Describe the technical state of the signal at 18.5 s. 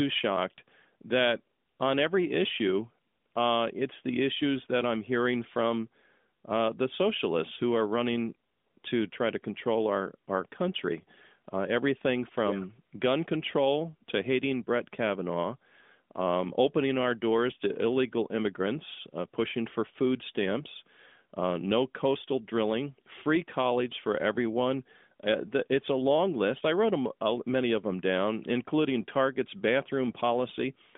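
At 18.5 s the audio is intact, with no fault audible at that moment.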